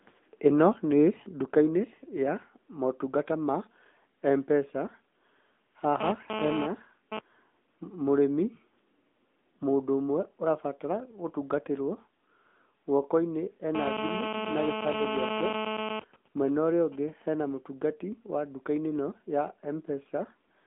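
The whole recording has passed through the AMR narrowband mobile codec, and the damage is plainly audible. The speech sits in a telephone band of roughly 150 Hz to 3.5 kHz, with nothing above 3.6 kHz. A spectrogram shows a hard ceiling there and empty space above. The codec rebuilds each 20 ms frame from a vocal-tract model and a few excitation pulses, which gives voiced sounds a buzzy, synthetic edge. The degree of coarseness fits a mid-rate AMR-NB mode, such as 10.2 kbps.

From 6.01 to 7.19 s a GSM phone buzz appears, about 4 dB below the speech. A nearby 2G handset is transmitting radio bursts 216.7 times a second, and the audio circuitry rectifies them into a raspy 217 Hz buzz unrelated to the talker. On a spectrogram this shows as a stack of evenly spaced harmonic lines from 217 Hz upward. The waveform carries a dense comb of pulses. Its short, broken character suggests a phone doing a data transfer.

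The GSM phone buzz returns at 13.75 s and runs steadily until 15.97 s, again about 4 dB below the speech. This time it is continuous, as a handset in an active call would produce. The same 217 Hz harmonic ladder runs unbroken across the spectrogram for just over two seconds, and it is loud enough to compete directly with the speech.

At 15.97 s the steady buzz gives way to GSM signalling bursts, which last until 17.58 s. The level is much lower, roughly 15 dB below the speech. The phone, still in its call but with its user silent, sends only short groups of radio bursts, so the rectified interference becomes even ticks with a longer 217 Hz buzz twice a second. The waveform shows clusters of spikes separated by gaps. A spectrogram shows short vertical stripes carrying faint 217 Hz harmonics.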